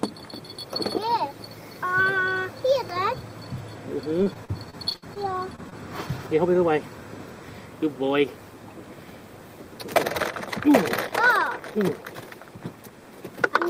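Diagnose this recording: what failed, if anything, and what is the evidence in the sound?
Repeated packet loss (robotic sound), 4.23–5.18 s, network stage: eight gaps up to 60 ms long are patched by extending the preceding sound, making the stretch choppy and robotic.

Short concealed packet loss, 5.56–5.60 s and 5.70–5.74 s, network stage: about 20 ms goes missing each time, filled from the preceding sound, heard as brief smears.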